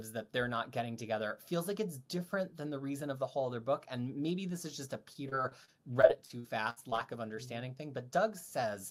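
Repeated packet loss (robotic sound) from 5.13 to 6.99 s, after "this is just a": about a dozen holes up to 59 ms, each patched by stretching prior sound, leaving choppy speech.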